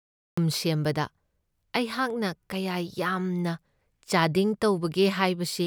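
A cut-off start affects this speech clip: digital silence runs until 0.37 s, then speech begins abruptly mid-sound, because capture started late and no natural attack remains.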